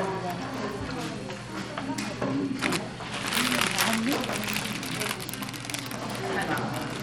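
Throughout, the treble flickers and thins while gritty noise rides on the sound, likely from Bluetooth SBC compression at a low rate fitting about 96 kbps.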